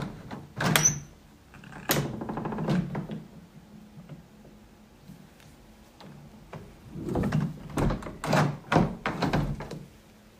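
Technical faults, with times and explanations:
No technical faults are audible anywhere in this sound.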